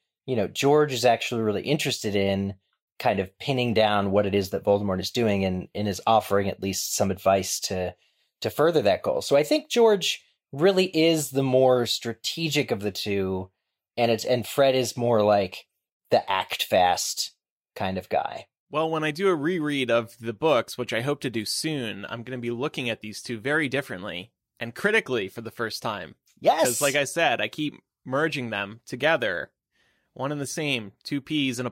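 No technical faults are audible anywhere in this recording.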